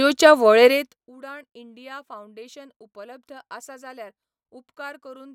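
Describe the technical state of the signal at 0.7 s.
At 0.7 s you're right inside a burst of zipper noise, running from 0.65 to 1.08 s while the speech level gets pulled down by roughly 25 dB. The gain isn't being smoothed. It drops in 1 dB jumps, around a hundred a second, and each jump leaves a tiny click in the waveform. Strung together, those clicks give a fine ticking, zipping texture riding on the voice until the fade settles.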